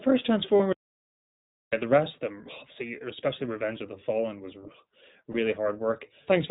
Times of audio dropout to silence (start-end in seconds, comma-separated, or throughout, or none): 0.73-1.73